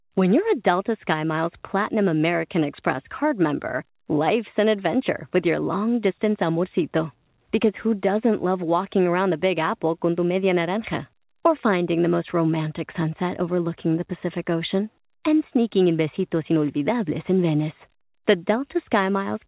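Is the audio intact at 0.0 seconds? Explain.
Yes, the speech at 0.0 seconds is intact, carried through the call path with nothing above about 4 kHz, as expected from a G.711 A-law codec at 64 kbps.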